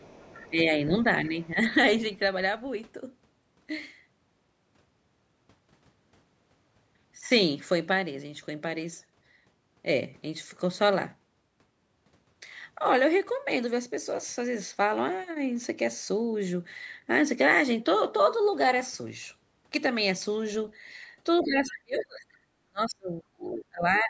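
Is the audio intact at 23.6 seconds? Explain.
No. From 22.66 to 24.1 s the speech dips deeply, by around 35 dB, likely speech suppressed in double talk, with the echo canceller turning down the near talker.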